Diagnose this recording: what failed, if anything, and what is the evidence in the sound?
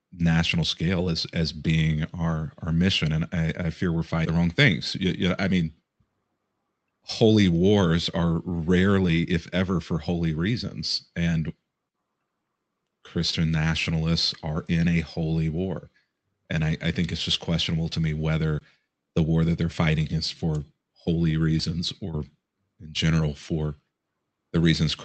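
The call dropped queued audio, either on the way or in its jitter buffer, a skip ahead at 4.25 to 4.27 s. Roughly 0.7 s of speech is missing, and the two sides join almost directly.

A jitter buffer speed-up from 5.05 to 5.61 s trimmed pitch periods, around 50 ms in all. Speech runs 8% faster at unchanged pitch and sounds hurried.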